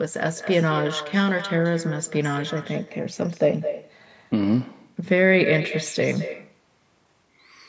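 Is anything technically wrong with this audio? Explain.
Yes. Throughout the speech, every phrase is followed by a fainter, thinner copy arriving roughly a fifth of a second later, about 12 dB below the direct speech. This is echo with no canceller: the far end is playing the call over a loudspeaker, its microphone picks that playback up, and nothing strips it out, so the talker's own speech returns after the network round trip, layered under the band-limited call audio, which stops at 8 kHz.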